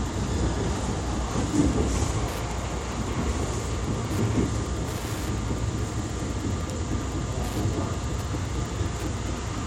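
Wi-Fi interference from 1.99 s onward: the circuit rectifies a nearby radio's 102.4 ms beacon, adding a steady tick about ten times a second, well beneath the sound.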